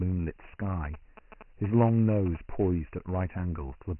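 A short speech clip that's been through Dialogic VOX ADPCM the whole way: nothing above 3 kHz, and a gritty hiss trailing the speech. The heavy damage fits 4-bit samples at 6,000 a second, about 24 kbps, the kind of thing phone menus and voicemail store. From 0.85 to 2.37 s there are GSM signalling bursts: a galloping dit-dit-dit of short 217 Hz buzzes, roughly 15 dB under the speech. That's a nearby 2G phone's short radio bursts getting rectified by the audio circuit while it signals.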